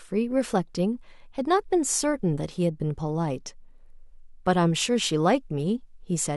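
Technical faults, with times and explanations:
No technical faults are audible.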